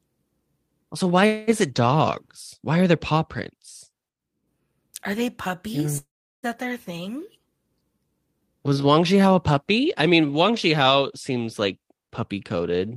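From 5.97 to 6.45 s, a long network dropout is likely: about 0.46 s of speech never arrives. The last sound smears into a fading buzz, then roughly 0.36 s of silence follows. Unlike a short glitch, the concealment gives out before speech resumes without the lost part.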